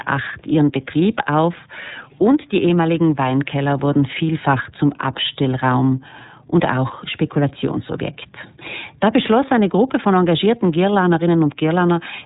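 Speech, coded with the iLBC codec from start to finish. Nothing above 4 kHz survives, so it sounds thin and narrowband. The damage is plainly audible as a rough, synthetic edge. The coarseness points to the 13.33 kbps mode with 30 ms frames, each coded independently.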